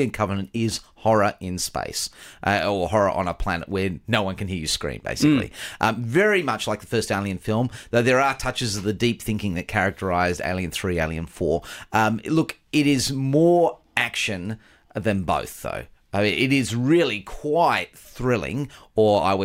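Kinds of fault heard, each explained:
No technical fault can be heard anywhere in the recording, and the signal stays continuous and stable throughout.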